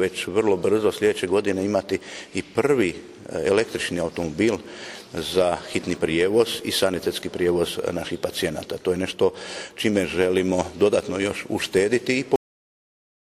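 At 12.36 s the audio stops dead in the middle of a sound. This is a cut-off end: the final stretch of audio was never written out or played, so the signal jumps straight to digital silence for the remaining 0.9 s. It differs from a natural ending or a fade-out because nothing decays or tails off first. Unlike a dropout, nothing resumes afterwards, and the silence simply runs to the end.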